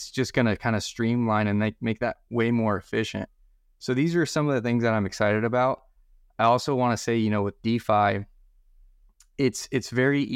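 Nothing goes wrong anywhere in this bit of speech, so there's no technical fault to point to at any moment.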